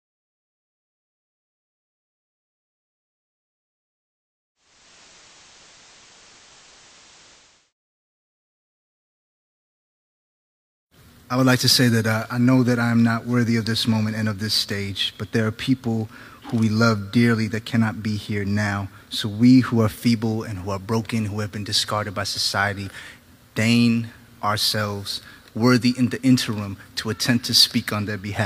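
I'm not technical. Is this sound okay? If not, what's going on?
No. From 4.55 to 7.73 s, digital radio blending to analogue: the station fades over half a second to its FM broadcast, turning hissy rather than dropping out, then returns.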